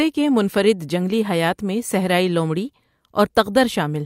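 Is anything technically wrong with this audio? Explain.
No, nothing technically wrong can be heard here.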